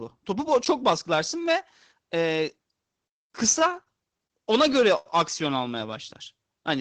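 Repeated stalls (stutter) at 3.59–4.32 s and 4.68–5.07 s: late packets emptied the jitter buffer, so the last sound was held. Unlike dropouts, the speech drags rather than losing anything.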